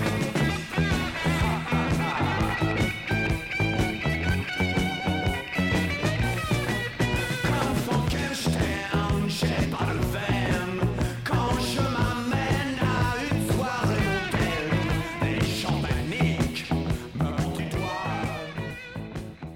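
Compressed frames skipped: the decoder drops whole frames, either missing from the file or rejected as damaged. Each gap spans a few frames of about 23 ms, so the sound jumps forward by about a tenth of a second at 0.49 s, 2.53 s and 18.69 s, a little less at 9.64–9.66 s, and about 150 ms at 17.58 s.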